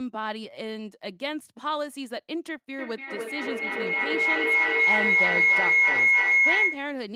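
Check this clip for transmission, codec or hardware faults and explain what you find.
One fault is present: feedback howl, running from 2.79 s to 7.02 s in this speech clip. A shrill tone around 2 kHz swells until it sits about 11 dB above the speech. Two devices on the same call are sharing one room, so sound from a loudspeaker re-enters a microphone and comes back louder on each pass. The loop concentrates on the frequency it favours, and each pass takes about a third of a second.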